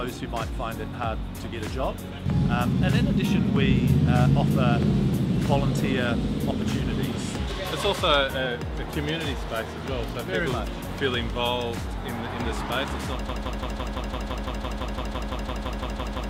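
At 13.29 s the audio locks into a broken-record loop: a fragment about 0.17 s long repeats exactly, back to back, some 18 times, and the clip ends still looping. The likely cause is a stalled player, encoder or stream re-sending the last piece it held, so whatever should have followed is gone. Unlike a stutter or dropout, the repeats are identical and evenly spaced, with no gap or recovery.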